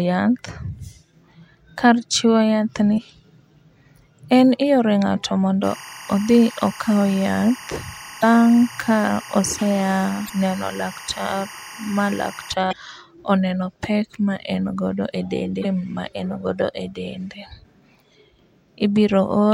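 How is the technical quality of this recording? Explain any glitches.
The recording has two kinds of trouble, a run of short stream glitches and a stretch of timecode leaking into the speech.

Damaged data in a compressed stream shows up at 2.94–2.99, 8.19–8.24, 10.26–10.30, 12.69–12.73 and 15.61–15.66 s. Corrupted frames knock the decoder off sync, so you get brief blips, each about 45 ms.

Timecode bleed runs from about 5.6 to 12.5 s. A neighbouring timecode signal at 23.976 frames per second leaks in, giving a chirpy warble around 1 and 2 kHz, roughly 20 dB under the speech.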